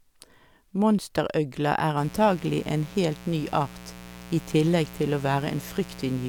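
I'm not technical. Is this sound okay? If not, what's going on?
No, not quite. From about 1.97 seconds until the very end at 6.29 seconds, a mains buzz comes in under the speech: a steady, raspy hum that sits fairly noticeably behind the talking. It comes from the electricity supply leaking into the recording, through something like a light dimmer or an unshielded cable. Here it's tied to the 60 Hz supply, which sends sharp little electrical spikes in 120 times a second, and those give it that gritty edge.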